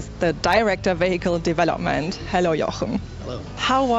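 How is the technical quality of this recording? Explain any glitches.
The technical quality of this recording is sound, with no glitches to explain.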